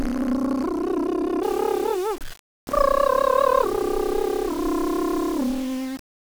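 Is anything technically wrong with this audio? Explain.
Yes. From 1.43 s to the end, the music has grainy distortion that changes with the sound, likely from low bit depth without dither. About 6-bit rounding ties the error to the signal, around 20 dB below the music, so quiet passages turn gritty. The waveform shows visible staircase steps, and the spectrogram shows broadband hash following each note.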